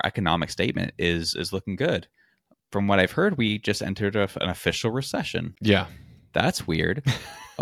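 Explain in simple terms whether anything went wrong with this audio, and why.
A short glitch cuts into the speech at about 5.53 to 5.59 seconds. That is damaged data in a compressed stream: part of the compressed file was corrupted there, so the decoder misread that piece, lost its place, and had to find the next intact frame.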